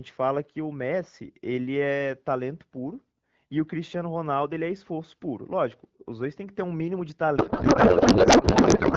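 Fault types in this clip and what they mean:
Codec payload misread: The sender and receiver disagree on how the coded bits are laid out, so the decoder unpacks frames with every field shifted. From 7.37 s to the end of the clip, the speech gives way to garbled noise and warble that barely tracks it. This fits octet-aligned AMR packets read as bandwidth-efficient ones. Before that point, the AMR wideband stream at 12.65 kbit/s decodes clearly, with only light codec damage.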